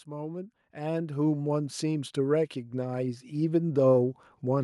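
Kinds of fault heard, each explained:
Automatic gain rising: the gain control slowly lifts a quiet input by about 12 dB from 0.05 to 3.59 s, speech and background swelling together rather than jumping abruptly.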